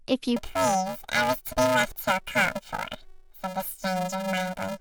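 From 0.36 s to the end, the speech turns into a robotic buzz at about 375 Hz with no clear octave shift. This is planar audio read as interleaved: 2.67 ms blocks of left-then-right samples, which fits a 128-sample block, are played as alternating pairs, so each block repeats at double speed.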